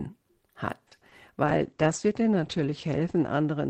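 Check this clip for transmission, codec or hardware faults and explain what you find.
Two faults are audible in this speech clip.

From 0.87 to 1.13 s there is repeated packet loss, heard as a robotic sound. Four short holes arrive in quick succession, the longest about 40 ms. Each is patched by stretching the previous sound. Over a third of that stretch is patched, so it sounds choppy and mechanical.

From 1.47 s to the end there is a call bitrate drop. The encoder is forced to code more coarsely, which fits a fall from 32 to 10 kbps. The audio bandwidth shrinks from 20 kHz to 8 kHz. The sound turns muffled and rough, worst for about a second.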